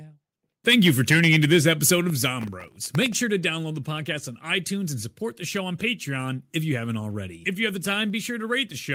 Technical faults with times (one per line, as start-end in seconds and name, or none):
2.41-3.12 processor overload crackle